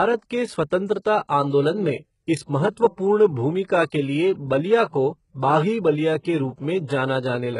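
A low-bitrate encode, likely HE-AAC compression, runs through the whole speech clip. The damage is heavy and fits a bitrate of around 12 kbps. Only the lower spectrum is coded directly, and the treble is rebuilt by copying lower bands upward under a coarse envelope. Nothing survives above 11.1 kHz. The synthetic top end keeps some brightness, but its harmonics don't line up with those below, so s sounds turn gritty, lispy and metallic.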